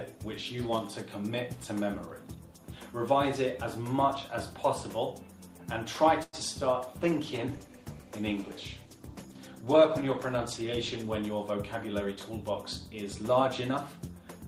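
At 6.23 s the audio hangs for a moment: one sound is held too long, with a faint buzzy, slightly dipped quality, until 6.35 s, and then it carries on from exactly where it left off. This is a short stall from a late packet. The packet missed its slot, the jitter buffer ran dry, and the receiver stretched the last sound by 98 ms to cover the gap. Nothing is skipped, but playback now sits 98 ms later than before.

From 7.01 s the sound turns coarse and somewhat watery, losing its top end and taking on a duller, muffled edge that lasts until 11.20 s. This is a call bitrate drop. The connection's bandwidth estimate fell, and the encoder was pushed from 32 kbps down to 15 kbps, staying at that floor for about 4.1 s. With so few bits, the codec quantises more crudely and trims high frequencies until the rate climbs back.

Overlapping the end of that stretch, from 11.03 s to 12.17 s, the audio seems hurried. 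It moves along about 8 percent faster while its pitch stays the same. This is a jitter buffer speed-up. Too much audio had built up in the buffer, so to bring the delay back down the receiver cut out many tiny slices, each one or a few pitch periods long. Together they removed roughly a tenth of a second.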